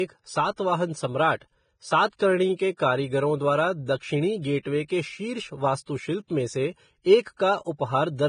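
Throughout the speech, the sound is hissy and grainy, with a rough texture and nothing above 9.7 kHz. This is likely Vorbis compression at a low bitrate around 20 kbps. The treble is quantised so coarsely that fine detail turns into noise, and high frequencies are cut off entirely.

From 7.37 to 7.40 s, just after "वास्तुशिल्प में से एक", a short hiss runs for about 30 ms ahead of a sharp attack, which sounds smeared. This is pre-echo. Quantisation noise meant for the loud onset spread across its whole transform block and filled the quiet moment before it.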